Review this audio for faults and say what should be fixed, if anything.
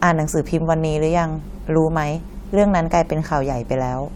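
Nothing in the speech recording calls for a fix, as no audible faults turn up anywhere in it.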